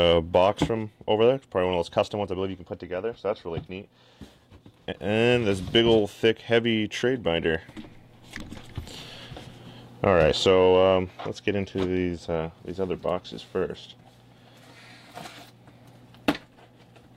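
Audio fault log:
No audible faults found.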